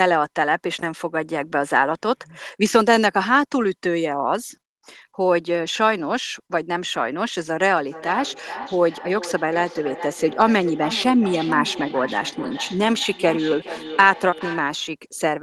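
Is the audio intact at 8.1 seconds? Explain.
No. From 7.86 to 14.76 s there is feedback echo between two devices: one device's playback re-enters another's microphone and its echo canceller ignores it. Speech returns roughly every 0.4 s, thinner and ringing, peaking at about 12 dB below the speech.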